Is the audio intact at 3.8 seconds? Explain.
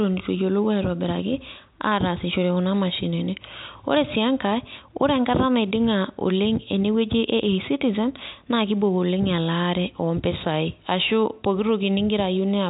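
Yes, at 3.8 seconds the speech runs through without any break or damage, carrying only the steady telephone-band sound of G.711 telephone coding with nothing above 3.8 kHz.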